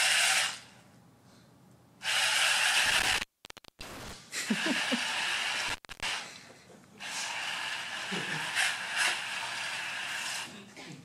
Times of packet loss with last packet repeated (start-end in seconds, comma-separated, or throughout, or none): none